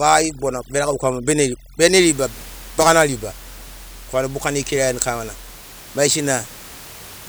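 Right from the start, through to about 2.0 s, you get overdone noise removal: a denoiser cranked too hard, clamping individual frequency bands whenever they sit close to its noise estimate. Quiet bits of the speech get dragged down with the noise, and the gaps fall to near silence with little twinkling specks. Once "riba bagana riba" comes in, the room noise is back, about 21 dB below the speech.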